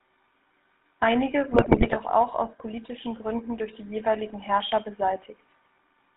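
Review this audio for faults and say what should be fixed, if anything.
The whole call runs through the GSM full-rate codec, which rebuilds the vocal tract from a filter driven by a sparse, regularly spaced pulse excitation and cuts everything above 4 kHz. The speech comes out buzzy and gravelly throughout, which fits GSM full rate at 13 kbps. To prevent it, carry the call over a wideband codec such as AMR-WB or EVS instead of the legacy full-rate path.

From 1.52 to 1.97 s, GSM bit errors hit the decoder: corrupted filter, pitch and gain values distort the spectrum and spike the level frame by frame. The speech breaks into squawks, pops and gargling. To prevent it, improve the radio link or use stronger channel coding, with bad-frame detection that mutes or conceals damaged frames rather than decoding them.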